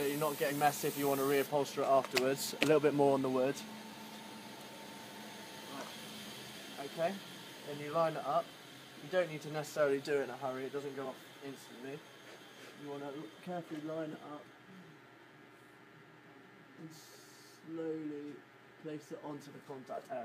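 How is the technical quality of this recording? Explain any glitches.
The recording has three brief glitches from damaged data in a compressed stream. They occur at 0.47 to 0.52 s, 11.01 to 11.06 s, and 14.40 to 14.45 s, each about 50 ms long. At these points the encoded data is corrupt. The decoder misreads those frames and loses sync. It then hunts for the next valid frame header. Each one is heard as a short chirp, squawk, click or hole breaking through the audio.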